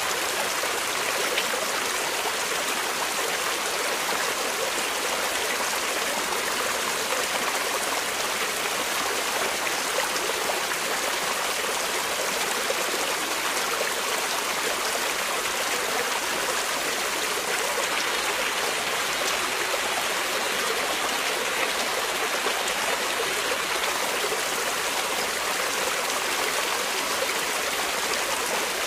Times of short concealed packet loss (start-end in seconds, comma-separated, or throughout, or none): none